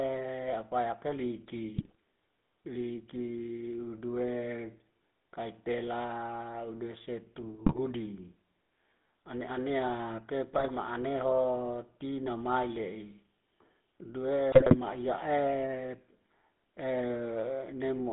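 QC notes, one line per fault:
Throughout: GSM full-rate codec. The sound has the buzzy, gravelly roughness of the first GSM coder, which fits a 13 kbps GSM full-rate stream. The coder rebuilds the vocal tract and drives it with a sparse pulse train, so the excitation is coarse and grainy. The band is held between 200 Hz and 3.7 kHz. On a spectrogram nothing shows above 3.7 kHz, and the harmonics look smeared and noisy.
1.76–1.95 s, 7.66–7.79 s, 10.51–10.71 s, 14.52–14.76 s: GSM bit errors. Each burst lasts about 0.13 to 0.24 s. Over that span the sound breaks into squawks, pops and gargling. Flipped bits corrupt the filter, pitch and gain values the decoder uses, so whole frames come out with a bent spectrum or a sudden jump in level. The error rate suggested is a few percent. The waveform shows short spikes in level, and the spectrogram shows smeared, misplaced formant bands at those times.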